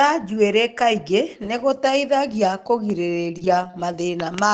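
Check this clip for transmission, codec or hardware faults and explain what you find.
Two packet-loss faults sit close together near the end of this speech clip, carried over an Opus call path whose audio tops out around 8 kHz.

From 3.63 to 3.65 s, a brief rough, noisier patch is a lost packet rebuilt from error correction: the next packet's low-bitrate copy filled those 20 ms, so there is no gap.

From 3.67 to 3.71 s and again from 3.71 to 3.75 s comes a short smeared wobble. This is short concealed packet loss: the decoder extended the preceding sound to cover roughly 20 ms missing each time, then blended back.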